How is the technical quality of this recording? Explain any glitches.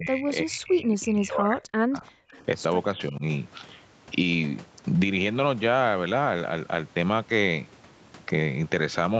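The main glitch is speech suppressed in double talk, heard three times: from 0 to 2.05 s, 2.25 to 2.42 s and 2.95 to 3.23 s. The talker sinks deeply, about 40 dB down across nearly two seconds at the start, then a brief dip of about 35 dB, then a milder dip of about 10 dB. That's likely an echo canceller mistaking the talker for loudspeaker echo while both ends spoke, then ducking the talker. The audio is band-limited to 8 kHz, consistent with an Opus call path.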